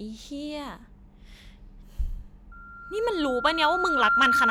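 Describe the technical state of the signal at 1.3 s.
At 1.3 s the speech signal runs on with no audible dropout, clipping, distortion or other fault.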